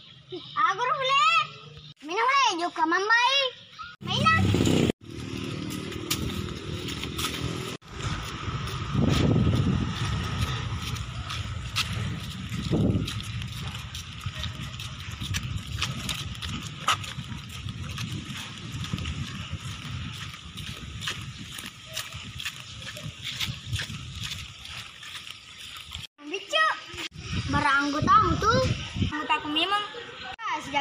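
No technical faults can be heard anywhere in the audio; the signal stays steady and intact throughout.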